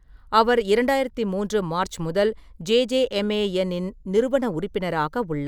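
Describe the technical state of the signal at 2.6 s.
At 2.6 s the speech signal is intact, with no audible dropout, distortion or other fault at that moment.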